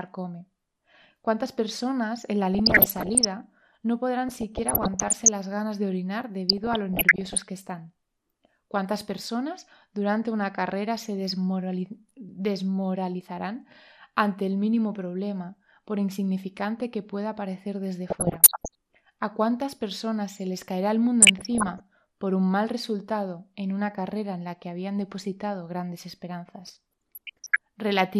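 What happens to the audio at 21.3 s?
A burst of burbling breaks over the speech from 21.22 to 21.8 s. This is DAB burbling: bit errors, at a rate somewhere under one percent, slipped past error correction into the MP2 audio data across a run of frames. Corrupted samples put short blips of noise into single sub-bands. Beneath that, the speech sounds dull and granular, with a gurgling edge, which is likely MP2 compression at a rate around 80 kbps. With so few bits, upper sub-bands shut off and the remaining ones are coarsely quantised.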